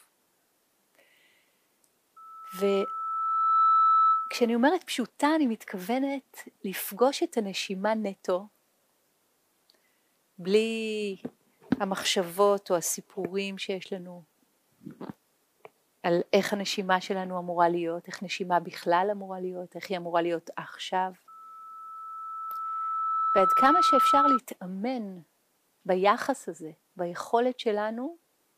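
From 2.16 to 4.57 s, and again from 21.28 to 24.40 s, loudspeaker feedback squeal appears as a pure tone at 1.3 kHz. The microphone is picking up its own loudspeaker, and at that frequency the loop gain rises above unity, so the tone feeds itself. It swells over roughly a second and a half the first time and about two seconds the second, ending a few decibels louder than the rest of the sound.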